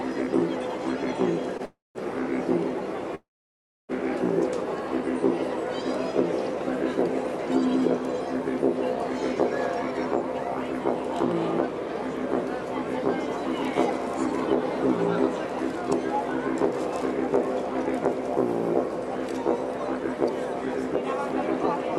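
At 1.57 to 1.62 s there is a short stall from a late packet: the jitter buffer ran dry, and the last sound was held for about 17 ms before playback resumed from the same point. On a spectrogram it shows as a brief horizontal smear with a slight dip in level.

Call audio freezes follow at 1.65 to 1.98 s and 3.15 to 3.92 s, likely from packets held up in transit emptying the jitter buffer. Each begins with a decaying buzz, then goes silent, for about 180 ms and then 640 ms, before the audio picks up where it stopped. The waveform shows flat gaps, and the spectrogram shows fading streaks into blank regions.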